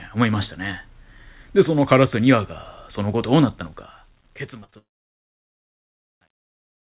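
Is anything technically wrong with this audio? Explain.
Yes, there are three faults in this speech clip.

From 3.52 s to the end, there is truncation distortion on a fade. The fade-out, which starts around 3.5 s, passes through a stage that keeps only 11 bits without dither. From about 4.68 s the tail sounds gritty. On a waveform it looks like blocky staircase steps, and a spectrogram shows harsh broadband grain.

At 4.60–4.64 s, 4.64–4.70 s and 4.70–4.74 s there is short concealed packet loss. About 20, 40 and 20 ms of audio went missing, and the receiver filled each gap by extending the preceding sound. The result is a quick smear and wobble. A spectrogram shows stretched, repeated texture with blurred boundaries.

From 4.78 s to 6.06 s there is a gap that sounds like a long network dropout. The concealment fades into roughly 1.2 s of silence, and the audio returns with that stretch lost. 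The waveform goes flat, and the spectrogram shows an empty band across the full range, which is limited to 4 kHz by the call codec. That limit is consistent with the 64 kbps G.711 mu-law that the band-limiting points to.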